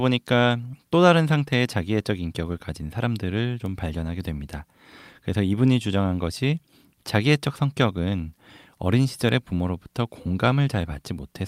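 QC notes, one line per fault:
3.66 s, bit error spike: a single sample jumps far from its neighbours and returns at once, the kind of excursion a single flipped bit produces, since the error is a power of two regardless of the speech underneath. It is heard as one sharp, broadband tick. Unlike a dropout or buffer glitch, no audio is missing or repeated, and unlike clipping, the tick bears no relation to how loud the speech is at that moment.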